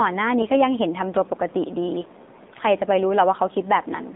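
Throughout, the speech carries the AMR narrowband mobile codec: the band is confined to roughly 200 Hz to 3.7 kHz, and the voice has a plainly buzzy, synthetic edge, consistent with a low mode near 7.4 kbps, where few pulses drive the vocal-tract model.

From 2.36 to 2.50 s, AMR bit errors turn the voice hoarse and gargly while pitch and level hold. Flipped low-priority bits, at an error rate of a few percent across several frames, misplace excitation pulses and skew the finer gain and spectral parameters.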